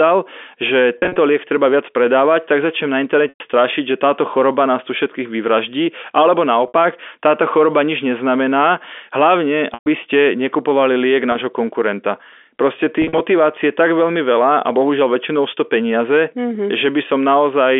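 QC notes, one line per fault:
0.98–13.20 s, packet loss with pitch repetition: dropouts at 0.98 s (140 ms lost across 180 ms, longest run 40 ms), 3.29 s (110 ms), 6.68 s (60 ms), 9.74 s (120 ms), 11.32 s (30 ms) and 13.02 s (110 ms across 180 ms, longest run 50 ms). Across each gap the receiver loops the last pitch period, fading it over about 50 ms. The shorter gaps come out as a brief buzzy, held tone. The longer gaps decay to silence before the speech cross-fades back, all within the G.711 telephone band of 250 Hz to 3.5 kHz.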